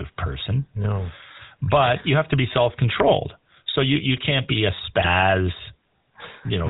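GSM full-rate codec damage runs through the whole of this speech recording. The voice carries the buzzy, gravelly roughness of that early codec, which fits a 13 kbps stream. The codec rebuilds speech from a vocal-tract filter driven by evenly spaced pulses and keeps only a third of the excitation samples, so fine detail is replaced by a coarse, rasping texture. It also passes nothing above 4 kHz, which leaves the sound dull and boxed-in. GSM bit errors strike from 5.00 to 5.07 s, just after "you can't be a". For that brief stretch the audio breaks into a squawking, gargled burst. Flipped bits reached the speech decoder and corrupted its parameters for those frames. The burst's length fits about three damaged frames on a weak radio link.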